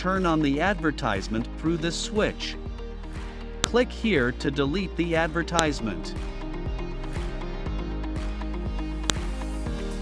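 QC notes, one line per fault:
3.64, 5.59 and 9.10 s: file header played as audio. Leftover WAV header bytes at each joined piece's start snap loudly, showing as a lone sharp spike and a thin vertical spectrogram line.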